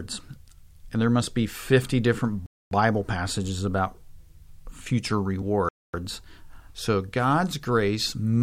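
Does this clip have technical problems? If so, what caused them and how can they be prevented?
Yes. Compressed frames skipped at 0.83 s and 5.41 s: the speech jumps forward, dropping roughly two frames (about 50 ms) the first time and about one frame (about 20 ms) the second, consistent with 24 ms frames. The decoder never played those frames, most likely because they were missing or rejected as damaged. Error-checked transport with retransmission, or decoder packet-loss concealment, would prevent these jumps.

Gap between chunks from 2.46 to 2.71 s and from 5.69 to 5.94 s: the speech stops dead for 250 ms, then resumes with nothing missing. The holes recur in step with chunks about 3 s long, pointing to each chunk being started late or padded with silence at its join. Trimming codec padding and queuing the next chunk before the current one ends would remove the gaps.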